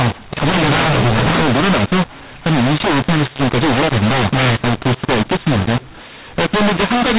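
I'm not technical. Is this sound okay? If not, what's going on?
No. Across the whole recording the speech sounds harsh and gritty, and the gaps between phrases are filled with hiss instead of going quiet. This is a case of mu-law and A-law mixed up. Telephone audio stored in the mu-law form was played back as if it were A-law. The two use different rules for turning numbers into loudness, so some parts come out too loud, others too soft, and near-silence is pushed up into noise.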